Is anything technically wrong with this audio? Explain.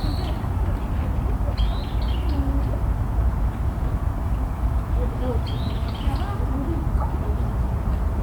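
Yes. Low bit depth without dither runs throughout. It likely comes from rounding to about 7 bits. The error tracks the sound, so quiet parts turn grainy.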